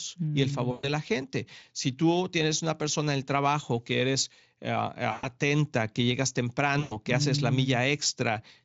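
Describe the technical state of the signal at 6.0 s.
At 6.0 s the speech signal is intact, with no dropout, clipping or other fault at that moment.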